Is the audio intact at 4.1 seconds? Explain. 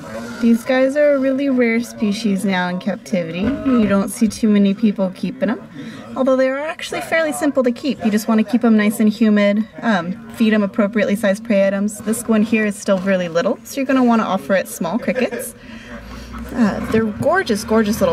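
No, 4.1 seconds falls inside a time-stretched section running from 0.0 to 5.44 s, slowed to about 0.74 times normal speed. Pitch holds steady, but the pace drags, likely from software repeating short slices to lengthen the audio.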